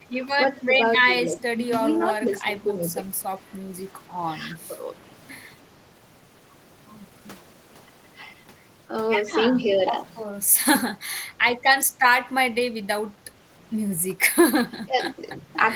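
Speech with the level dipping in bursts at 0.53, 1.02–1.84, 2.19–2.84, 4.68, 9.53–9.8, 14.09 and 14.61–15.47 s, around 5–10 dB and near 20 dB at the end, likely speech suppressed in double talk by the echo canceller.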